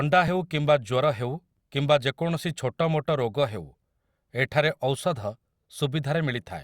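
Listening through the speech recording, nothing stood out as a technical fault at any point.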